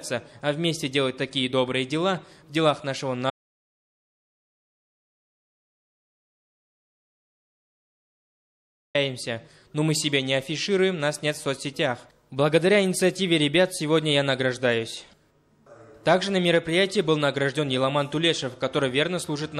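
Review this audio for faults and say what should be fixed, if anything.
An audio dropout to silence runs from 3.30 s to 8.95 s. Sound cuts off abruptly, then returns mid-flow. The 5.6 s gap is silent, without room tone. The input was likely lost while recording continued. Secure connections and monitor input during capture.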